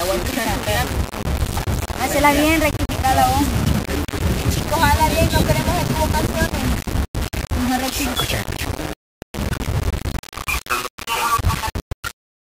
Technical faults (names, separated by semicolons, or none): low bit depth without dither